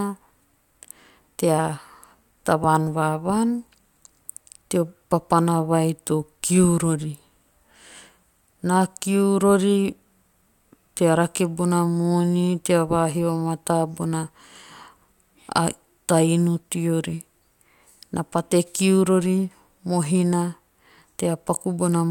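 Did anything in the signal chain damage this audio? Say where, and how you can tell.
No, nothing in the signal chain has damaged this speech recording. No stage, from the wiring through to playback, leaves any audible mark of harm on the sound.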